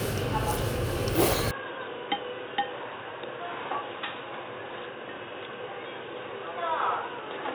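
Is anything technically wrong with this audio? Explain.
Yes. From 1.51 s the sound turns dull and boxy, nothing above 3.8 kHz, about 10 dB quieter with faint new hiss, likely an input switched to a poorer, narrower-band device.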